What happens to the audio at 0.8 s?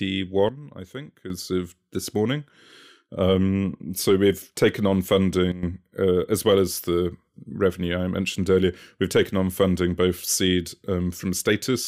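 A sudden gain jump runs from 0.49 s to 1.30 s, so 0.8 s falls inside it. The speech and the background noise drop by about 10 dB together in one step, with no fade, and stay at that lower level until the gain returns just before "of this morning". The likely cause is a digital gain setting applied instantly from one sample to the next rather than ramped in smoothly.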